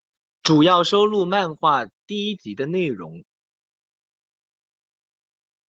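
Speech recording; no technical faults are present.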